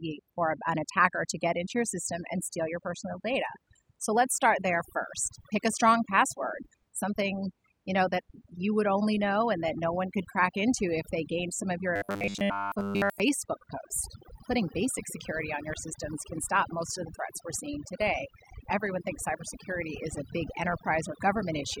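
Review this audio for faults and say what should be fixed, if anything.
Overdone noise removal affects the whole recording. The background drops and breaks up, with twinkling specks left behind. The reduction was set too hard. Any frequency band close to the estimated noise level gets pushed far down or cut, and the quieter parts of the speech fall below that line and vanish with the noise. Fix it by reprocessing the original with a gentler reduction setting.

Robotic sound from repeated short buffers appears from 11.96 to 13.21 s, between "gained some of your" and "post putting basic security". The speech turns into a rigid, metallic buzz at 100 Hz that still roughly tracks the words. Most of that span is repeated material. The likely cause is audio arriving too slowly, so the software loops the last short chunk instead of playing fresh sound. A 100 Hz buzz fits a chunk about 10 ms long. 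The looping imposes that fixed-rate buzz and drops the real audio underneath. To prevent it, give the capture or playback path a larger buffer or more processing headroom so new audio always arrives in time.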